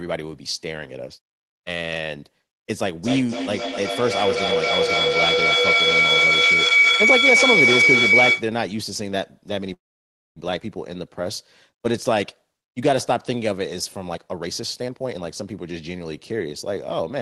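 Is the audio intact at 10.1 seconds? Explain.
No. At 10.1 seconds the sound has stopped: from 9.73 to 10.39 s there is a call audio freeze, where a brief fading continuation of the last sound gives way to about 0.6 s of silence. The likely cause is packets held up in transit, leaving the jitter buffer empty. When they arrive, the audio resumes exactly where it broke off, so nothing is lost, but everything after it plays about 0.63 s later.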